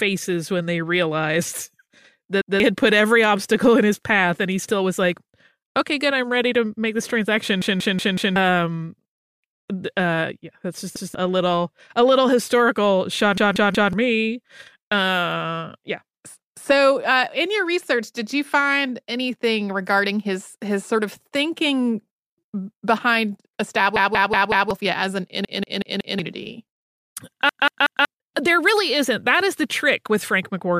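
Repeated buffer stutters in the speech at 2.42–2.60 s (before "had put every obstacle"), 7.62–8.36, 10.96–11.15, 13.38–13.93, 23.96–24.71 (before "as an"), 25.45–26.19 and 27.49–28.05 s (before "there really isn't that"). New audio arrived late, so the last 186 ms block replayed one to four times with hard joins. That block length fits an 8192-sample buffer.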